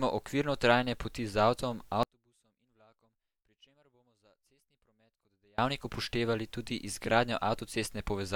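From 2.03 s to 5.58 s, just before "upoštevali tudi", the speech falls about 36 dB to a faint trace. This is likely one channel inverted, cancelling in mono. Unlike a dropout, a faint copy persists rather than silence.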